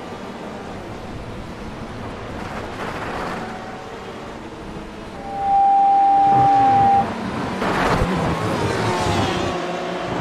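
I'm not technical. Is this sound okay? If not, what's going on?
No. There is loudspeaker feedback squeal from about 5.12 to 7.08 seconds. A microphone was picking up the very loudspeaker it was feeding, so the sound kept going round that loop and growing louder each time. One pitch, around 792 Hz, won out and swelled in under half a second into a steady, piercing tone that stands well above the rest of the sound until it stops.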